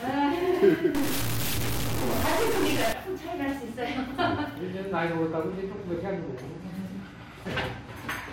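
From 0.95 s to 2.93 s the sound turns noisy and distorted, and quiet moments fill with noise. A stuck bit is the likely cause, with one data bit held at 0 or 1. Unlike clipping, it damages small values too, not just peaks.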